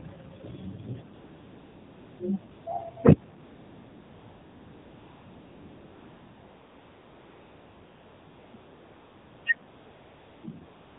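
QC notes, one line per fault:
Throughout: AMR narrowband mobile codec. Nothing above 4 kHz gets through, and the speech has the plainly buzzy, synthetic edge of a vocal-tract model driven by sparse pulses. The depth of that damage fits a low AMR-NB rate of around 7.4 kbps.
1.14–2.20 s, 2.52–2.66 s, 3.44–8.54 s, 8.56–9.46 s, 9.68–10.44 s, 10.66 s to the end: AMR comfort noise. In each of these gaps, lasting 1.06, 0.14, 5.1, 0.9, 0.76 and 0.34 s, the sender treated the line as silent and stopped sending speech frames. The receiver then filled the gap with smooth synthetic noise, so the background switches audibly in and out.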